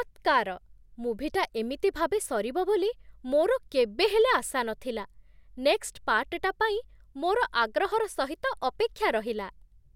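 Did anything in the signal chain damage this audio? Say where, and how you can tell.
No, nothing in the signal chain has audibly damaged this speech recording. No stage, from capture through to playback, leaves any mark I can point to.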